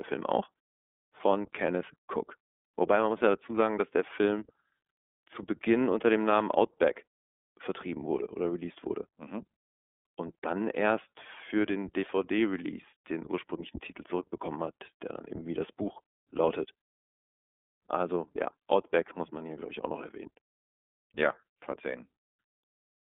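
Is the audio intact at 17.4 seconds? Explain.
No. At 17.4 s the speech carries iLBC codec damage, which runs through the whole clip rather than starting there. The codec encodes each block's excitation on its own, with no help from the previous block, and the sound fits 30 ms frames at about 13 kbps. The line band spans 250 Hz to 3.5 kHz, so the voice sounds thin and telephone-like, and the plainly audible coding leaves it rough and slightly synthetic.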